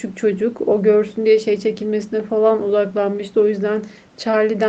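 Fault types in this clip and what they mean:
No faults: the speech has gone through normal call microphone processing and a WebRTC call path, and its content stopping at about 8 kHz is what that codec's bandwidth setting produces.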